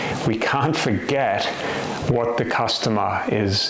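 Nothing here sounds wrong: it's just audio carried over a call link, with the top end stopping around 8 kHz the way you'd expect from a wideband codec like G.722.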